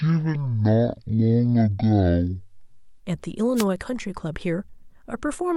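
Speech, and the first 3.0 seconds are a section at the wrong speed: from 0.0 s it runs at half speed, so everything drags and sits roughly ten semitones low, deep and slow, and most likely the editor or player was fitting that stretch to the wrong clock. Then from 3.55 to 3.65 s there's a wireless microphone noise hit, a quick swish of static about a tenth of a second long, where the FM mic's radio signal faded and the receiver noise rose up over the speech.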